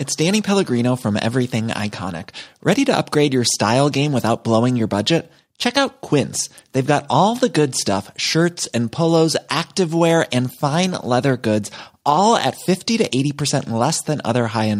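No technical faults can be heard at any point in the speech recording.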